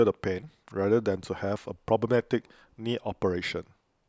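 Speech recording with no audible technical faults.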